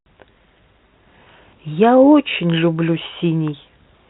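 No technical faults are audible anywhere in the speech.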